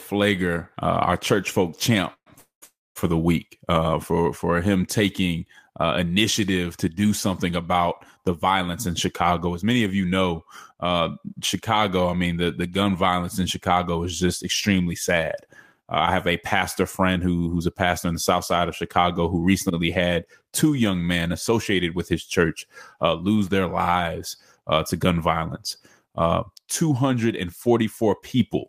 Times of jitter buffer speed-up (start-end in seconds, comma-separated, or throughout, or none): 9.20-9.87, 15.13-23.29, 24.57-25.11, 27.67-28.57